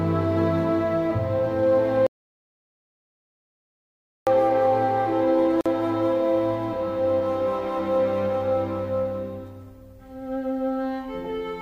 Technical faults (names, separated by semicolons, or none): audio dropout to silence; gap at a join of encoded pieces